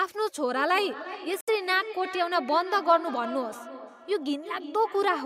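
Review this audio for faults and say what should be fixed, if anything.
Feedback echo between two devices runs from 0.56 s to the end, with repeats roughly every 0.3 s, peaking about 13 dB below the speech. A second device is replaying this microphone's signal, and the first device's canceller can't remove it. Unlike room reverberation, the repeats arrive as distinct copies at a fixed spacing. Keep only one device joined to the call in that room, or mute the other's speaker.

At 1.41 to 1.49 s the sound cuts to 69 ms of silence and then resumes, likely a Bluetooth stall as the headphone buffer ran dry. A codec dropout would blur or garble the sound, but this is clean silence. Reducing 2.4 GHz interference or keeping the phone closer to the headphones should prevent it.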